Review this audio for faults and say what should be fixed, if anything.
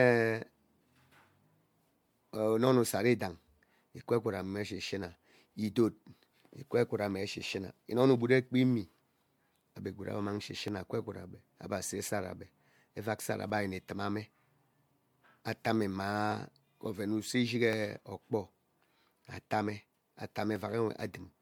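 Generation loss, throughout: the speech sounds swirly, hollow and smeared, likely from about four MP3 passes near 96 kbit/s, each re-quantising on a shifted frame grid. To prevent it, keep working copies lossless and encode to MP3 only once.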